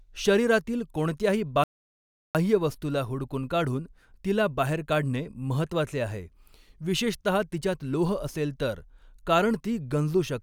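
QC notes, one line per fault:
1.64–2.35 s, playback stall: the speech cuts out mid-flow and the output falls completely silent for about 0.71 s, then resumes. The gap is too long and too abrupt to be a natural pause. The likely cause is the player running dry of buffered data or having its audio thread blocked, so nothing reached the output until it caught up.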